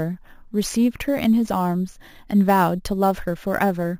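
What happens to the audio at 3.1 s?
At 3.1 s the speech carries a bright, metallic fizz riding on top of it, its level rising and falling with the voice, and this runs through the whole clip rather than starting there. It is imaging from sample-and-hold upsampling. The audio was raised from 16 kHz to 44.1 kHz by repeating samples without a smoothing filter, so a mirrored copy of the spectrum fills 8 to 16 kHz at about 23 dB below the signal, moving opposite to the pitch.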